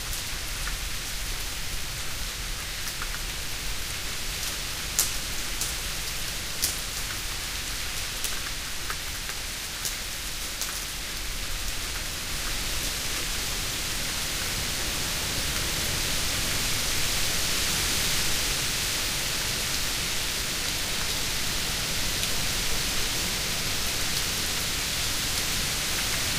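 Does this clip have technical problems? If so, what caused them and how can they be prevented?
Yes. Sample clock jitter runs through the whole clip: the converter's timing wobbles by roughly 10 microseconds, so each sample lands slightly early or late, and the error grows wherever the waveform changes fastest. The result is a hiss-like roughness only about 10 dB below the sound itself, swelling on loud, bright passages and vanishing in quiet gaps. On a spectrogram it appears as a broadband noise haze that tracks the signal's level and high-frequency content, with clean dark background during silences. Prevention is a stable, low-jitter clock for the converter, ideally its own crystal or a clean word clock rather than a recovered or noisy one.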